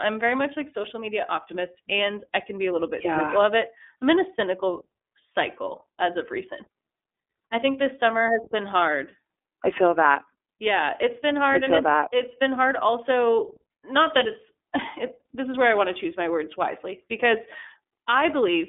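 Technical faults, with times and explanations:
Throughout, iLBC codec: the speech is confined to a narrowband telephone line of roughly 250 Hz to 3.5 kHz, with nothing above 3.7 kHz, so the upper energy of sibilants and breaths is missing. Each 30 ms frame's excitation is coded on its own, without drawing on the previous frame, which leaves a plainly audible rough, slightly synthetic texture on the voice. The 30 ms framing fits iLBC's 13.33 kbps mode.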